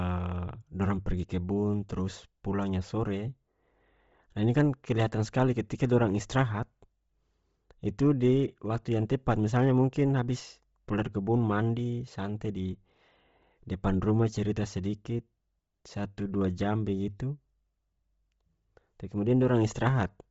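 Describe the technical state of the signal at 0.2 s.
At 0.2 s you're already hearing the damage that runs through the whole speech clip. Nothing survives above about 7.7 kHz, and the top of what's left sounds breathy and grainy rather than clean, with a heavily processed feel. That's likely Bluetooth LC3 compression working hard: at a low rate, around 24 kbps with short 7.5 ms frames by the sound of it, the codec throws out much of the upper spectrum and fills the gaps with noise.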